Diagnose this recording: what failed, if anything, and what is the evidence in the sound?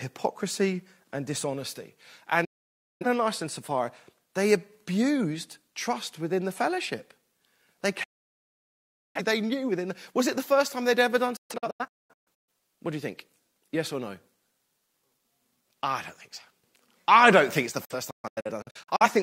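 The reception stage failed with a digital broadcast dropout. Speech mutes at 2.45–3.06 s after "and dishonesty" and at 8.04–9.21 s before "they knew within". It breaks into scattered holes at 11.36–12.49 s (longest 0.21 s) and at 17.85–19.06 s after "don't think it's the" (longest 0.13 s). Corrupt frames are discarded and muted with 8 ms fades, so the waveform drops to silence and the spectrogram shows clean full-band blank columns.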